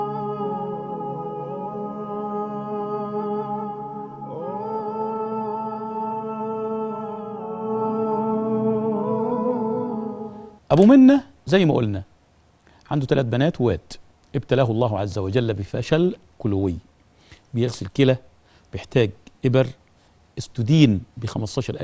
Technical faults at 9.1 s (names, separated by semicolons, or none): none